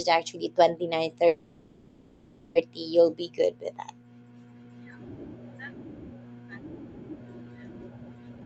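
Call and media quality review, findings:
Call audio freeze, 1.27–2.57 s: last sound stretched into a fading buzz for about 1.3 s, never reaching silence. Likely cause: delayed packets draining the jitter buffer. Audio resumes where it stopped, nothing lost, about 1.3 s of added delay.

Jitter buffer speed-up, 8.30–8.46 s: hurried playback at 183% speed, pitch unchanged. Receiver trimming repeated pitch-period slices, roughly 150 ms in total, to cut the surplus buffered delay. Output band-limited near 8 kHz, consistent with an Opus call path.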